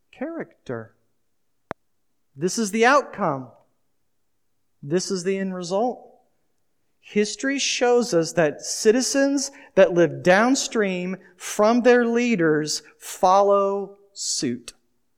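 A sudden voltage step or spike, likely from a plug, switch, static discharge or driver glitch, entered the signal path at 1.71 to 1.73 s and was shaped by the downstream circuitry into a single short pulse. In this speech clip, that pulse is heard as one sharp loud pop, around ten decibels above the level of the speech. The pop lasts only about 20 ms, and the speech carries on beneath it without a break.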